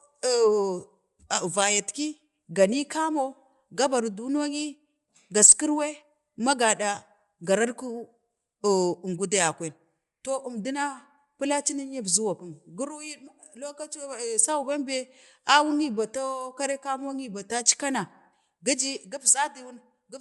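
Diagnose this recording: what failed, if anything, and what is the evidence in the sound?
The fault sits at the codec stage. Throughout the speech the band stops dead at 11.5 kHz, and the top end has a breathy, grainy texture. A spectrogram shows a flat ceiling with speckled noise fill beneath it. The likely cause is Bluetooth LC3 compression, which fits 10 ms frames near 48 kbps. The encoder zeroes upper bands and substitutes noise for them.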